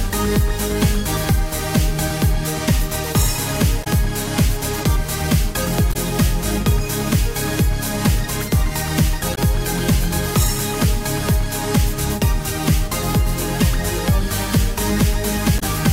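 Damaged data in a compressed stream appears four times, at 3.80–3.87 s, 5.89–5.96 s, 9.31–9.38 s and 15.56–15.63 s, each lasting about 70 ms. At each point the bytes reaching the decoder were corrupted, so it could not read those frames correctly, lost its place and had to hunt for the next valid frame header. Each event is heard as a brief chirp, squawk, click or short hole.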